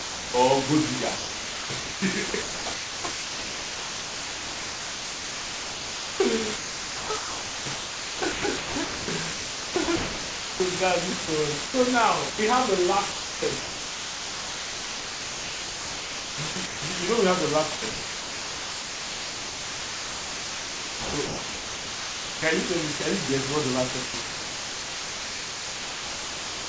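Low bit depth with dither runs through the whole clip. The speech is coded at a depth that fits about 3 bits, and dither turns the rounding error into a steady, even hiss. The hiss sits at roughly the same level as the speech, with no distortion. It is layered over audio already limited to below 8 kHz by the call path.

Sound dropped by the voice detector opens the clip at 0.00 to 0.34 s. The onset is likely misjudged as background, so about 330 ms are lost and steady comfort noise plays instead.

Sound chopped by the voice detector follows from 1.16 to 10.60 s, with about 7.5 s replaced. Sending likely switches on and off repeatedly, so syllables break up. A shorter chopped stretch runs from 11.26 to 11.74 s.

A brief drop at 12.30 to 12.38 s swallows 80 ms just before "have the". Chopping resumes after "have the", from 13.12 to 16.82 s, until "you know we have". It occurs again from 17.76 to 22.42 s.

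A 20 ms drop at 22.98 s falls just before "you guess what the". Chopping then continues from 24.06 s to the end, with about 2.6 s replaced by comfort noise.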